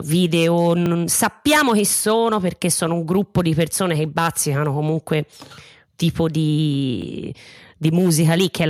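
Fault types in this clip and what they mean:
Repeated buffer: the playback device ran short of fresh audio and played its last block of speech again. That happens twice, at 0.86–0.88 s just before "sappiamo chi sono perché" and at 7.02–7.04 s. Each is a single extra pass of a piece about 20 ms long, which fits a 20 ms buffer. It sounds like a brief click or buzz, with little or no speech lost. On a waveform, an identical 20 ms segment appears twice with an abrupt discontinuity at the join. A spectrogram shows a thin vertical broadband line there.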